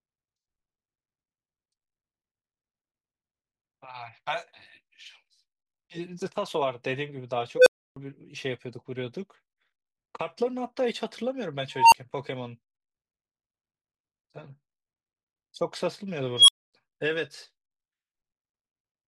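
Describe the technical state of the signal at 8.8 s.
At 8.8 s the speech signal is intact, with no audible fault at that point.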